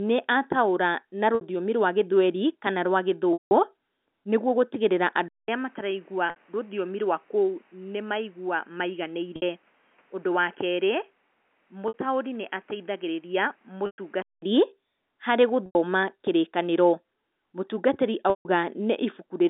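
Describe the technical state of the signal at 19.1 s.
At 19.1 s the signal is intact, carried on an ordinary telephone line in G.711 A-law coding with its narrow band running from about 200 Hz to 3.7 kHz.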